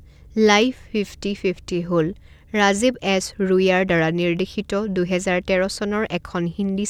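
Throughout the speech there is a steady buzz at 46.9 Hz from a block size mismatch (truncated): one stage hands on longer blocks than the next takes, and each block's tail is dropped. The buzz rate fits 1024-sample written blocks. Tempo stays at 1.0x, with pitch unchanged.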